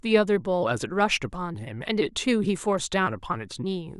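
Speech with no audible faults.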